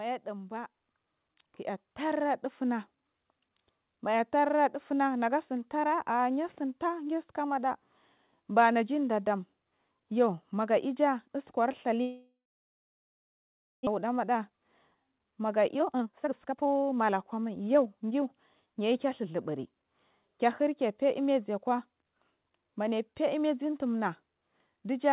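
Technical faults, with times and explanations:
0.38 to 2.34 s, block size mismatch (truncated): a 100 Hz buzz sits on the speech because the end of each block is dropped when one stage writes longer blocks than the next reads.
1.02 s, microphone volume stepped up: speech and background jump together by about 7 dB as the call software raises the microphone's input gain in a single step.
12.02 to 13.89 s, long network dropout: the last sound trails off as a fading buzz or hiss into about 1.4 s of silence, and about 1 s of audio never returns, likely because no packets arrived.
13.97 to 18.12 s, jitter buffer speed-up: the speech runs at 119% speed with unchanged pitch and sounds hurried as the receiver trims pitch-period slices, about 0.7 s in total, to cut the built-up delay.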